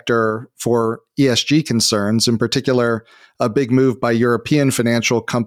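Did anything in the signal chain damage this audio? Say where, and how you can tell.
No, nothing along the chain seems to have hurt this speech recording; I can't hear any sign of damage at any stage.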